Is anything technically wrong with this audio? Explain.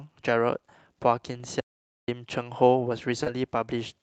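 Yes, there are three kinds of fault in this speech clip, which passed through an Opus call path that band-limits the sound to about 12 kHz.

Lost packet rebuilt from error correction, 1.31–1.41 s and 3.26–3.28 s: packets went missing, and the decoder played the low-bitrate copies carried in the following packets. About 60 ms, consistent with three 20 ms packets, and then 20 ms sound rougher and noisier but leave no gap.

Audio dropout to silence, 1.60–2.08 s: the input likely disconnected or was muted while recording continued. The speech cuts off abruptly, leaving about 0.48 s of dead digital silence with no room tone.

Short concealed packet loss, 3.23–3.28 s: roughly 20 ms never arrived in time, so the receiver extrapolated the preceding sound and blended back, producing a brief smear or wobble.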